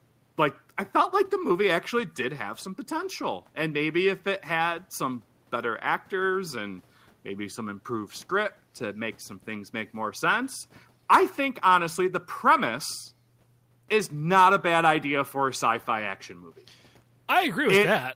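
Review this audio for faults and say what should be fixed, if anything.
Nothing stood out on listening that needs fixing; the faint room noise, about 39 dB below the speech, belongs to the recording space rather than the system.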